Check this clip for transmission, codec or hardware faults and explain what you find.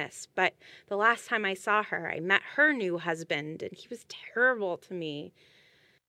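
No transmission, codec or hardware faults found.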